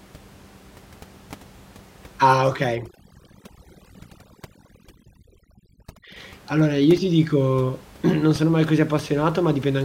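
From 2.75 to 6.16 s, overdone noise removal pulls down the room noise, which otherwise sits about 25 dB below the speech, breaking it into twinkling specks. Unlike a noise gate, which shuts everything at once, individual frequency bands vanish separately.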